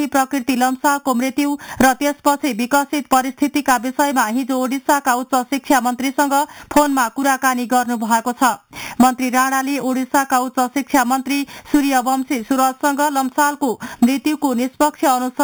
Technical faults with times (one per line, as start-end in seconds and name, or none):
0.00-15.44 imaging from sample-and-hold upsampling